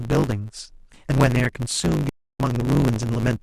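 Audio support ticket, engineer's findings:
Block size mismatch (truncated), whole clip. The upstream stage writes longer blocks than the downstream stage reads, and each block's tail is discarded. The sound shows a steady 100 Hz buzz at the block rate, and the speech runs 1.16x fast at about normal pitch. This fits a 512-sample write against a read of roughly 441 samples.

Stream reconnect, 2.09–2.40 s. The connection dropped, the player went silent, then reconnected with a fresh decoder mid-stream. The result is a 293 ms gap, after which the speech resumes about 0.3 s further on. The skipped stretch is lost, as with a live feed rather than a resent burst.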